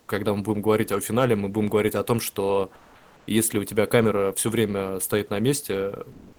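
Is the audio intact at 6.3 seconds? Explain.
No. From 6.12 s to the end of the clip at 6.38 s, the real background is replaced by comfort noise. The sender has stopped transmitting during the pause in speech, likely through Opus discontinuous transmission. The receiver fills the gap with synthetic noise. It is steady and featureless. The room noise before it had natural detail. The background level also shifts by about 10 dB where the synthetic noise takes over.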